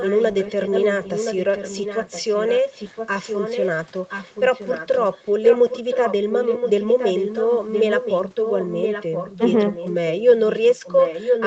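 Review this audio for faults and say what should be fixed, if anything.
There's an echo leak running through most of this speech: a delayed copy of the talker trailing about 1.02 s behind, from 0.0 to 3.86 s and 4.08 to 9.4 s at roughly 10 dB under the speech, short scraps at 9.72 to 9.9 s and 10.09 to 10.23 s around 15 dB down, then loudest, only about 5 dB down, from 10.45 s to the end. That's likely a far-end speakerphone whose echo canceller isn't fully cancelling what its mic picks up, so it gets sent back. To prevent it, have that side use a headset or get its acoustic echo cancellation tuned to handle the room and that long delay.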